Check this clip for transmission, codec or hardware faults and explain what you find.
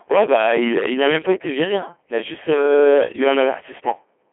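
Two faults run through the whole clip: hard clipping and Codec 2 vocoder coding.

Hard clipping is present from start to finish. Every loud syllable has a harsh, gritty fuzz. The level was pushed about 11 dB past what a stage could pass, so roughly a tenth of the samples have their peaks sliced flat, and those flat tops throw extra harmonics high into the spectrum.

Codec 2 vocoder damage is also heavy across the entire clip. The speech is robotic and buzzy, and the band is narrow, from about 250 Hz to 3.4 kHz with nothing above 3.6 kHz. The decoder rebuilds the voice from sine waves using only pitch, voicing, energy and a spectral envelope, and the coarseness fits the 2.4 kbit/s mode.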